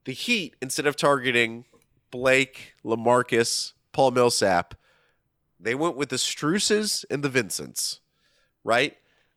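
No technical faults are audible in this recording.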